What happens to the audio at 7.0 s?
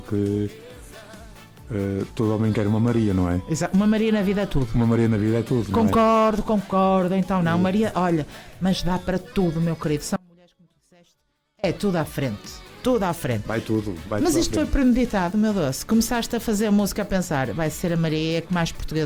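Nothing goes wrong at 7.0 s; the audio carries on intact through that moment, with no dropout, click, glitch or other fault to be heard.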